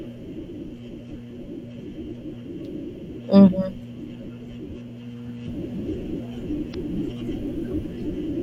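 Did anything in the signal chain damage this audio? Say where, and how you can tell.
Yes. At the codec stage, there is damaged data in the compressed stream. From 6.70 to 6.75 s the speech breaks into a short, harsh blip. Corrupted bytes made the decoder misread those frames and lose sync. It then hunted for the next valid frame header.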